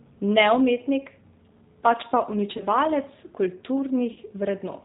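Throughout, the speech passes through the G.729 codec at 8 kbit/s, which rebuilds it from a vocal tract filter, a pitch predictor and sparse pulses, so nothing above 4 kHz survives. The damage is plainly audible as a rough, slightly synthetic, band-limited voice.

From 2.57 to 2.64 s and again from 4.13 to 4.19 s, VoIP packet loss concealed by the speech codec occurs. About 30 ms of audio is missing each time, which fits one lost packet. The decoder stretches its last pitch and filter into a fading buzzy tone or coloured noise, and the voice stays weakened briefly afterwards.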